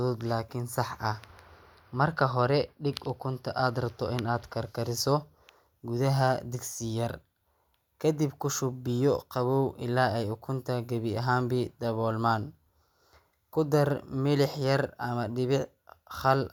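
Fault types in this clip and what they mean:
No audible faults are present in this speech recording.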